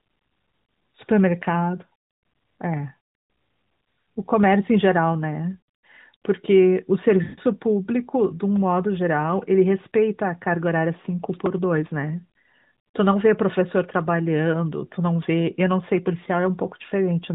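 Lost AMR speech frames from 7.24 to 7.39 s break up this speech recording. For 140 ms, about seven 20 ms frames, the decoder received nothing it could trust and kept rebuilding sound from the last good pitch and vocal tract settings at falling gain, so the sound stretches and fades before recovering a little rough. A repeated buffer at 11.46 s then gives a tiny click or buzz: a 1.45 ms piece, which fits a 64-sample buffer, plays three extra times with hard joins because fresh audio arrived late, though almost nothing is actually lost. Throughout, the AMR narrowband mobile codec at 12.2 kbps caps the bandwidth at 4 kHz and adds a light synthetic edge.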